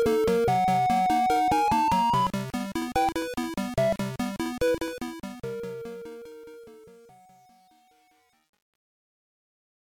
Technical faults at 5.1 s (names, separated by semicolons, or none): truncation distortion on a fade